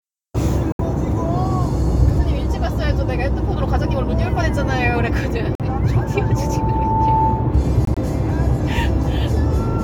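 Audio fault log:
0.72–0.80 s, 5.55–5.61 s, 7.85–7.97 s: corrupt frame muted. Damaged compressed frames were rejected by the decoder and replaced with silence, leaving abrupt gaps of 84, 60 and 118 ms (each a few frame lengths) while the surrounding audio keeps its timing.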